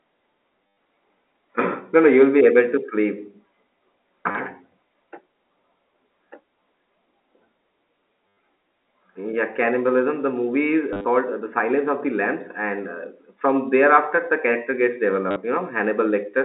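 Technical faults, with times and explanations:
0.67–0.76 s, 4.31–4.35 s, 8.28–8.37 s, 10.93–11.05 s (between "movie is" and "called uh") and 15.31–15.36 s (after "thereafter the character gets"), packet loss with last packet repeated: lost audio, about 40 to 100 ms each, is filled by replaying the previous packet, giving a robotic stutter buzzing near 100 Hz, which fits 10 ms packets. The waveform shows short repeated copies with steps at each join, and the spectrogram shows vertical click lines, all within the narrow 250 Hz to 3.7 kHz telephone band.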